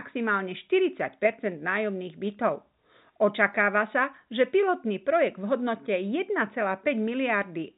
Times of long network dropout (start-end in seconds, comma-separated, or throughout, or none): none